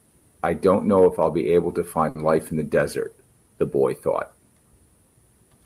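At 2.09 s the speech briefly stalls, until about 2.17 s. This is a short stall from a late packet. A packet arrived after its playout time, and the jitter buffer ran dry. The receiver filled the gap by stretching the last sound for about 60 ms. When the packet came, playback resumed from the same point. Nothing is lost. The sound is simply held too long, with a slight buzz or dip. Everything after it runs about 60 ms later.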